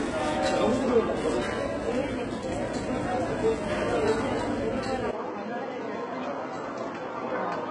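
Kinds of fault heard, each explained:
HE-AAC compression: throughout the sounds, the treble is rebuilt rather than coded. The upper bands are copied from lower ones and shaped coarsely, so high detail turns gritty and metallic with nothing above 11 kHz. Heavy damage like this likely points to a very low bitrate, around 12 kbps.
Input switched to a poorer device: from 5.11 s to the end, after a 20 ms silence, the sound drops about 5 dB and turns duller, losing everything above 7.6 kHz, with a new noise floor roughly 35 dB down. This is likely a change to a narrower-band input.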